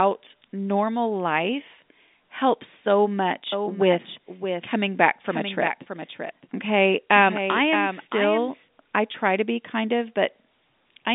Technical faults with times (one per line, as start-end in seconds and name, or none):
3.52-8.68 doubled audio track
9.12-9.14 packet loss with pitch repetition